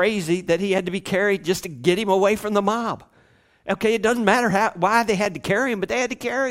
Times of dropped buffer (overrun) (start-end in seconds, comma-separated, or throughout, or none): none